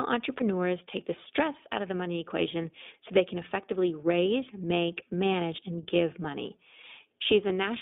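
Throughout, the speech carries iLBC codec coloration. The band runs from 200 Hz to 3.6 kHz, and each frame's excitation is coded independently, which fits 20 ms frames at 15.2 kbps. The result is plainly audible roughness and a slightly synthetic edge.

Lost iLBC frames occur at 0.38 to 0.43 s, just before "take the stress out"; at 2.62 to 2.65 s, between "out of the money" and "so they can effectively"; and at 7.48 to 7.51 s. Each gap is about one frame. The decoder conceals it by repeating the last pitch cycle with noise, which sounds like a brief buzzy held vowel, and the speech recovers immediately afterwards.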